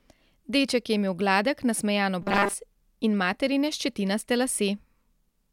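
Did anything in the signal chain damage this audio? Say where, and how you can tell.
Yes, at the driver or buffer stage: from 2.22 to 2.54 s, right after "je imel gladek nasmejan" and ending before "in materine ščetinaste", the speech turns into a rigid, metallic buzz at 200 Hz. This is robotic sound from repeated short buffers, likely caused by audio arriving too seldom so that a 5 ms block is looped while most of the real signal is skipped. Unlike codec warble, the buzz pitch stays fixed rather than following the voice.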